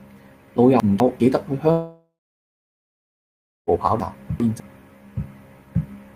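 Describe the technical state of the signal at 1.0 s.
At 1.0 s the signal sits inside a stretch of chunks out of order running from 0.8 to 1.2 s. A 200 ms chunk of speech was delivered or written one chunk late, so it plays after the chunk that should follow it and the two have effectively swapped places. Nothing is missing, but the sequence is wrong, leaving three hard joins, and for that 0.4 s the speech comes out briefly jumbled.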